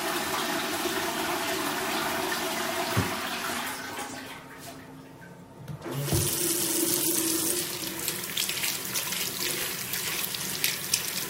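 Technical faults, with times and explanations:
No technical faults detected in this audio.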